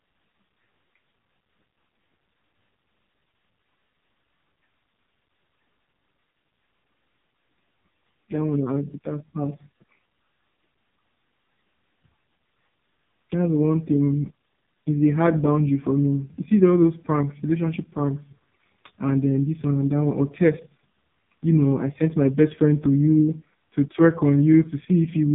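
The speech passed through an AMR narrowband mobile codec at its lowest rate, about 4.75 kbps, so nothing above 3.8 kHz survives and the voice sounds heavily buzzy, muffled and synthetic throughout.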